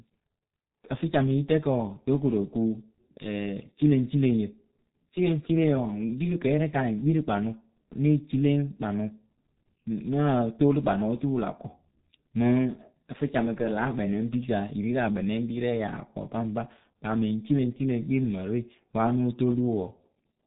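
A G.723.1 codec runs through the whole of this speech recording, with heavy damage that fits a bitrate of about 6 kbit/s. Nothing above 4 kHz survives, so the speech sounds muffled and hoarse, and the slow 30 ms frame updates smear consonants together.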